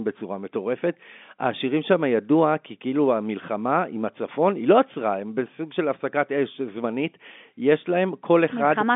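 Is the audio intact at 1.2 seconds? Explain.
Yes, the audio is intact at 1.2 seconds, with the speech running through the telephone-band G.711 coding as normal and nothing above about 3.7 kHz present.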